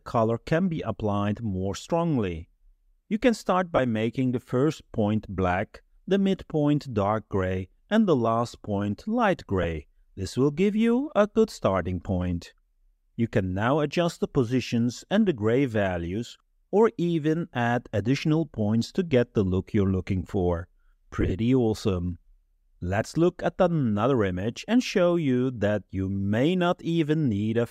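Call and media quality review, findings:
Brief noisy smears at 3.76–3.79 s and 9.63–9.65 s, with short scattered dropouts across 21.21–21.32 s. These are lost LE Audio frames: the LC3 decoder concealed each gap by repeating the last spectrum with scrambled phase. The gap lengths fit 7.5 ms frames.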